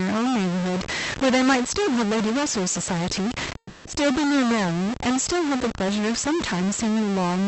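A stuck bit, likely from a broken data line or converter holding one bit at a fixed value, runs through the whole recording. Roughly half the samples land off by that bit's weight, in a pattern that follows the waveform, so the speech carries distortion from start to finish. Because the bit also flips along with the sign of small values, the pauses between phrases fill with a steady noise rather than going quiet.

From 3.57 to 3.87 s there is a call audio freeze, likely caused by packets held up in transit until the receiver's jitter buffer ran dry. The receiver bridged the shortfall by stretching the last sound for about 280 ms, heard as a fading buzz or hiss that drops to silence for about 70 ms before the speech resumes. Since playback then continues exactly where it stopped, nothing is lost; the rest of the clip is simply pushed about 280 ms later. Throughout, the call codec's band limit near 8 kHz keeps the top end dull.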